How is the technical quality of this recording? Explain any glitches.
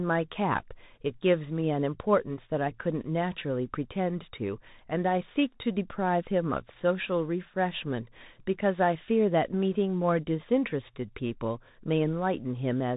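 The recording is held back by one fault that runs the whole way through: the sound of a Bluetooth CVSD headset codec, and it's plainly audible. CVSD codes the signal one bit at a time, each bit just saying up or down, with a step size that keeps adapting, which fits the 64 kbps headset link. Nothing above 4 kHz gets through, so the speech sounds narrow and boxy. Loud bright bits outrun the step and distort, s sounds come out scratchy, and a grainy hiss sits underneath.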